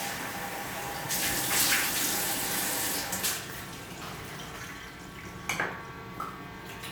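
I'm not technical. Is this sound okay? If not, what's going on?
Yes, no faults to report.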